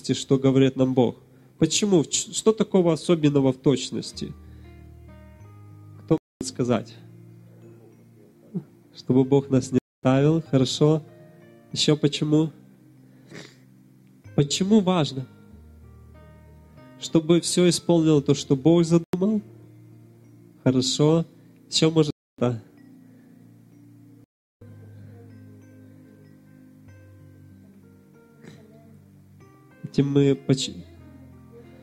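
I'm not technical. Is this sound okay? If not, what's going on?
No. The sound has five blocks of digital silence, where it cuts to total silence: 6.18 s, 9.78 s, 19.04 s, 22.11 s and 24.24 s, each lasting between about a tenth and four tenths of a second. Unlike a fade or a quiet patch, nothing remains during each gap. That points to the program not supplying sound in time.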